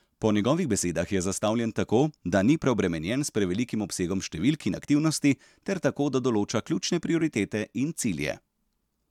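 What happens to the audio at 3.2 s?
Nothing goes wrong at 3.2 s; the speech carries on there without any audible fault.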